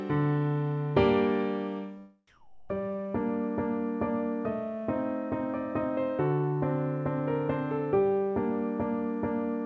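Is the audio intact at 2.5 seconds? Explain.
No, from 2.27 to 2.69 s the background is replaced by comfort noise: steady, featureless hiss about 1 dB quieter, likely from discontinuous transmission, not a silent dropout.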